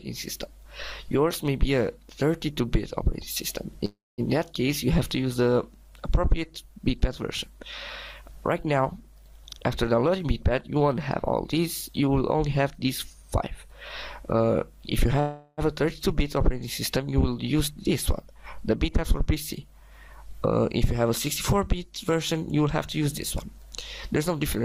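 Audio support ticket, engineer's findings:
Call audio freeze, 3.85–4.21 s and 15.20–15.61 s: the last sound is held and stretched as a fading buzz or hiss, then audio resumes where it stopped. 325 ms and 375 ms are filled, nothing lost, so latency rises by the same amounts. In the first event the fill decays to about 210 ms of silence. Likely cause: jitter buffer underrun from late packets. Spectrogram shows a smeared, decaying band with a blank stretch in the first event; the waveform shows a tapering envelope.

Jitter buffer speed-up, 9.58–13.72 s: playback is rushed at about 108% speed with pitch unchanged, and roughly 0.3 s is trimmed in total. The receiver is draining excess buffered audio by repeatedly cutting pitch-period-sized pieces. Spectrogram shows harmonic spacing unchanged but events compressed in time; the waveform shows many small splices.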